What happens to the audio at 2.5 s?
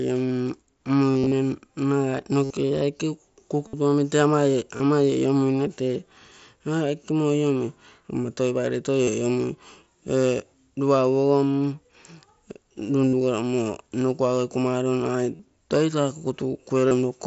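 At about 2.44 s the audio hits concealed Bluetooth headset packet loss lasting roughly 60 ms, to 2.50 s. That length points to a run of several consecutive headset packets dropping out. The receiver fills the gap by repeating the best-matching stretch of the last 20 ms or so of waveform, so the gap sounds like a short buzzy tone held at full level, with a slight warble as real speech resumes. The wideband mSBC codec's 8 kHz bandwidth carries through the concealed section.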